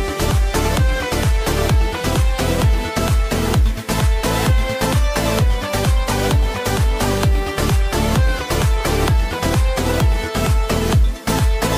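No technical faults can be heard anywhere in the audio.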